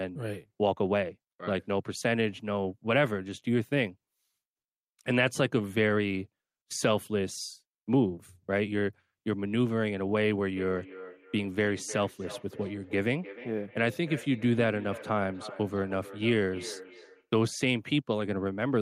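From 10.56 to 17.31 s, feedback echo between two devices: second-device playback re-entering the microphone repeats sound roughly every 300 ms, seen as evenly spaced spectrogram ghosts.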